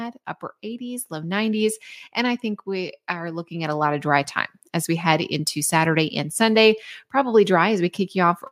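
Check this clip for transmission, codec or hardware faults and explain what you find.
One fault appears in this speech clip: automatic gain rising, from 0.61 s to 4.18 s. The automatic gain control judged the incoming level too low and steadily pushed its gain up, by about 11 dB over those three and a half seconds. Because the boost is applied to the whole signal, the voice and the background noise swell together, so the room seems to draw closer as the speech grows louder, rather than the talker simply raising their voice.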